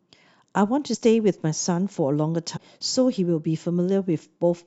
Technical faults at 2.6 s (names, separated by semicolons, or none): compressed frames skipped